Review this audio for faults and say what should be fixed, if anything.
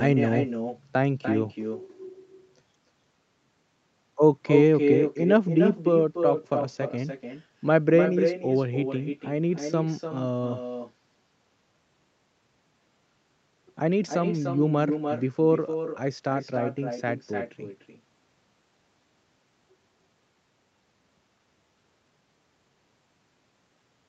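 Echo with no canceller runs throughout this speech. Each phrase returns about a third of a second later, only about 6 dB quieter and thinner, because the far end's loudspeaker feeds its microphone and nothing removes that loop. Fix it by enabling acoustic echo cancellation at the far end, or having that participant use a headset.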